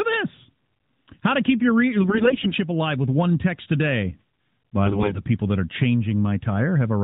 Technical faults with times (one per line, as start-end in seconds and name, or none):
2.02-2.53 AMR bit errors
4.86-5.22 AMR bit errors